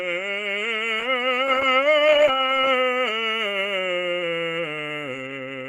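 From 1.01 to 2.73 s a call bitrate drop, consistent with roughly 32 to 13 kbps, coarsens the music: muffled, watery tone, spectrogram showing highs cut off.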